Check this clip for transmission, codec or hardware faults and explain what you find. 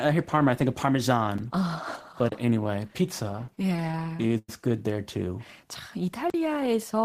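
Two kinds of fault are present in this speech clip: three blocks of digital silence and a stretch of repeated stalls (stutter).

Blocks of digital silence occur at 1.38 s (about 7 ms), 2.29–2.32 s (26 ms) and 6.30–6.34 s (40 ms, just after "good there too 자"). Samples were zeroed, probably because the output buffer went unfilled in time, so each block cuts abruptly. The shortest is a tick and the longest a short hole. A waveform shows flat near-silent segments, and a spectrogram shows vertical blank gaps.

Repeated stalls (stutter) run from 3.31 to 4.49 s, ending just before "good there too 자". Packets arrived late roughly twenty times, so the jitter buffer ran dry and the receiver extended the preceding sound each time. About a quarter of the span is filled this way, with the longest wait 102 ms and nothing lost. The speech drags and stammers. A spectrogram shows smeared, held harmonic bands, and the waveform shows repeated near-identical cycles.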